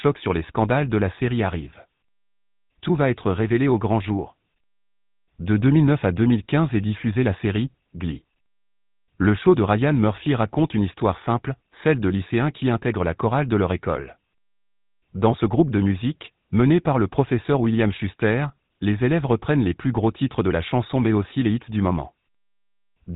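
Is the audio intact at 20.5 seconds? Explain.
No. The GSM full-rate codec affects the whole clip. Its pulse-excited vocal-tract model makes the speech buzzy and gravelly, and nothing above 3.8 kHz passes.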